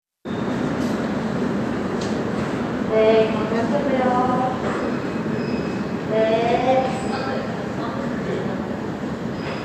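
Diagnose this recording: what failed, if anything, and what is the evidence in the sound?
Nothing failed; no faults audible.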